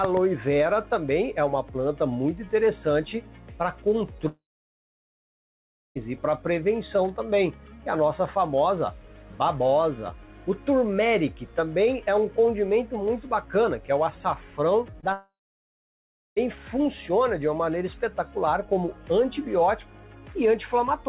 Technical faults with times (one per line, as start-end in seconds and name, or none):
4.28-5.97 long network dropout
14.91-15.05 short concealed packet loss
15.13-16.38 long network dropout